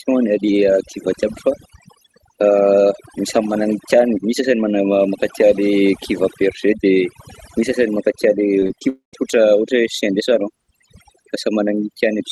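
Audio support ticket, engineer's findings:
Overdone noise removal, throughout. Background pulled down and broken up into twinkling specks. The suppressor is cutting individual frequency bands hard whenever they sit near its noise estimate, taking quiet speech detail with them.

Repeated packet loss (robotic sound), 8.59 to 8.83 s. Choppy patch with four short holes, the longest about 22 ms, roughly a third of the span concealed. Jitter buffer/concealment is stretching the last sound over each loss, and the next loss arrives before recovery.

Long network dropout, 8.89 to 9.15 s, just before "ohatra chien de salon". The last sound is extended as a fading buzz, then about 120 ms of silence. Audio resumes with the missing section gone. Likely a stall in packet arrival on the call path. Band limit near 12 kHz consistent with Opus.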